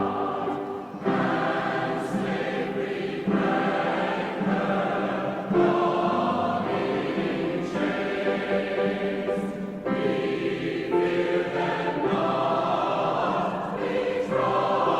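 No technical faults can be heard anywhere in this recording. Nothing in the signal points to a problem in how it was captured or delivered.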